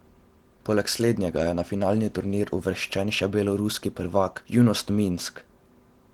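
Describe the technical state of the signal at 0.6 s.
At 0.6 s the speech carries Opus voice compression, and it runs through the whole clip. The damage is plainly audible. The codec is working in hybrid mode. A linear-prediction coder handles the band up to 8 kHz, and a transform layer codes the band above it. The top reaches about 20.1 kHz, so the sound is not muffled by a narrow band. The roughness comes from coarsely coded excitation, which fits a rate near 16 kbps. Voiced sounds turn slightly hoarse and robotic.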